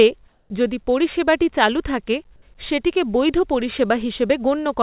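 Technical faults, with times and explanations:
0.28–0.50 s, comfort noise in place of the background: for about 220 ms before "যদি পরিষেবাটি চালু থাকে", the real background, about 32 dB below the loudest speech, gives way to a smooth, featureless hiss about 3 dB quieter. The likely cause is discontinuous transmission: the sender went quiet in the pause and the receiver synthesised shaped noise. A spectrogram shows the textured background turning into an even wash capped at 4 kHz like the call band, and the waveform shows a flat, steady envelope.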